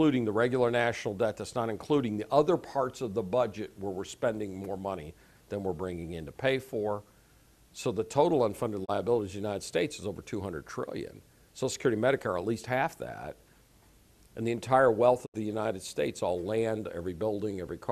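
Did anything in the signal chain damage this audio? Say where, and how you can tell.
Yes. The damage happened at reception of the digital broadcast, before the decoder. There are two digital broadcast dropouts. At 8.84 s the sound fades out over 20 ms and stays silent until 8.90 s. At 15.25 s it fades the same way and is gone until 15.36 s. The gaps fit one lost 24 ms frame, then three frames totalling 72 ms. The receiver lost frames and muted until good ones returned. That audio is gone.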